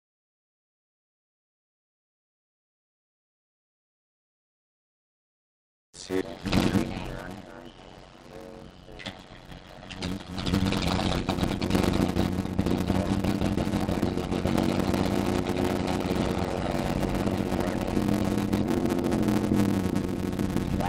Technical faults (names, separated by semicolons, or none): block size mismatch (padded)